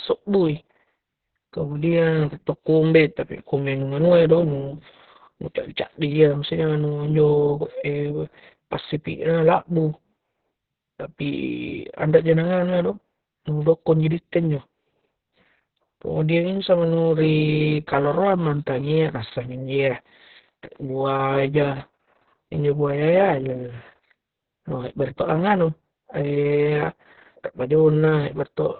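From start to finish, the speech carries heavy Opus voice compression. Nothing survives above about 4.2 kHz, so the band is narrowband and telephone-like, which points to the SILK linear-prediction coder running at a very low rate, around 6 kbps. The excitation is coded so coarsely that the voice turns muffled, hoarse and faintly robotic.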